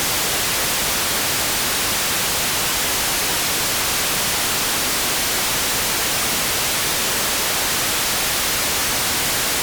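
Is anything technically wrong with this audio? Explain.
No, nothing technically wrong can be heard here.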